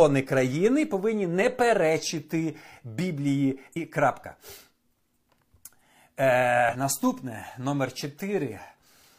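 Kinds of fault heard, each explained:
Damaged data in a compressed stream: two short glitches break into the speech, at 3.72 to 3.77 s and 6.69 to 6.76 s. At each point, corrupted bytes in the compressed stream made the decoder misread frames and lose sync until it found a valid frame header.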